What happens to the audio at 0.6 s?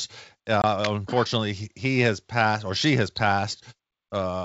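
At about 0.62 to 0.65 s there is packet loss on an ADPCM call: roughly 20 ms of audio, around two packets' worth, drops out and is replaced by a hard-edged silence just before "unfortunately he has passed". With nothing received, the decoder's adaptive predictor and step size drift away from the sender's, so when the G.722 wideband stream resumes the speech comes back with slight distortion that settles within some tens of milliseconds.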